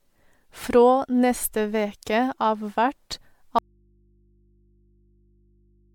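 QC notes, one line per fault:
Throughout: generation loss. The speech sounds swirly, smeared and hollow, with consonant onsets blurred and an odd watery texture that a single 128 kbit/s MP3 pass would not produce on its own. This is likely repeated MP3 decoding and re-encoding, roughly ten times at that rate, with each pass quantising on a shifted frame grid so that noise and spectral gaps pile up. Content stops cleanly near 19.9 kHz, which fits the MP3 lowpass.
3.59 s to end: audio dropout to a faint residue. The speech cuts off abruptly mid-flow and never returns. It is not a natural pause or a fade. Only mains hum remains, sitting about 40 dB below the earlier speech level. The signal source was likely lost while the path downstream stayed live, so the open input keeps passing hum through to the recording for the rest of the clip.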